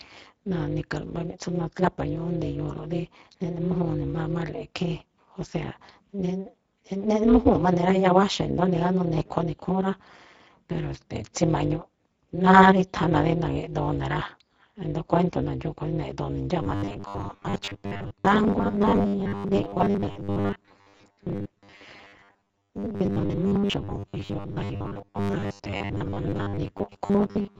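Speech runs its whole length through an overlap-add ripple: the level swings by about 60 dB around 200 times a second, because the windowed frames were rejoined with an overlap whose gains don't sum evenly. It sounds like a metallic buzz with extra tones around each note. The same speech also carries Speex codec damage that is plainly audible. The excitation is starved of bits, so consonants and vowels turn hoarse and noisy. The top octave above 4 kHz is a hissy, shaped fill rather than real detail. That breathy hoarseness differs from the ripple's regular pulsing. From 16.63 s to the end at 27.60 s a rigid, metallic buzz at 100 Hz sets in. The speech is still roughly followed. The likely cause is repeated short buffers: the playback software fills late gaps by looping the last stretch of audio, and a 100 Hz buzz fits a 10 ms repeat. Roughly half the material seems to be repeats, with the real audio in between skipped. 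Unlike the ripple, this buzz sits at 100 Hz rather than 200 Hz, and it begins partway through the clip.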